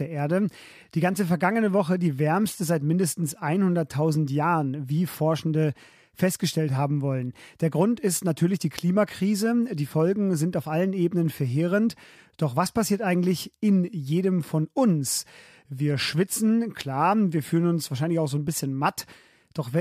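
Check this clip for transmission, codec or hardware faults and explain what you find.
Nothing here points to a transmission, codec or hardware problem; the speech comes through steady and even the whole way, with no faults to report.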